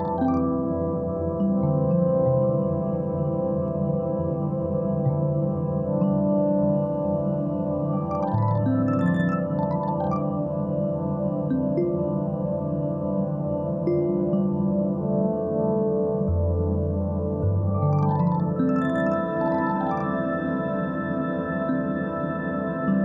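Nothing here jumps out as a technical fault at any point, so there's no problem to describe.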